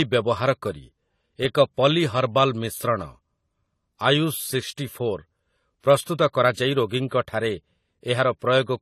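Throughout the speech, the sound is dull and smeared with a fizzy, warbling edge on sibilants, likely from AAC compression at a low bitrate, around 32 kbps. A spectrogram shows a hard ceiling near 14.1 kHz.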